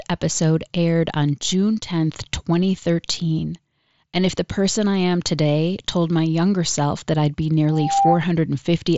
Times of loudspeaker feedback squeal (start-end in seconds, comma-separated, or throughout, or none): 7.68-8.22